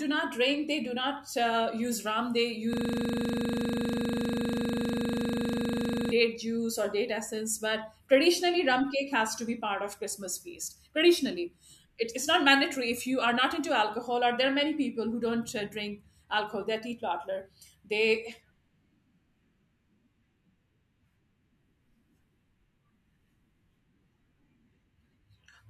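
From 2.73 s to 6.11 s the speech locks into a system hang loop: a single 40 ms slice of audio repeats exactly, about 85 times, while the driver or host stalls and the hardware keeps replaying the same ring buffer. At a 25 Hz repeat rate this comes across as a hard, machine-gun stutter rather than a tone. Normal playback resumes with "date juice or date".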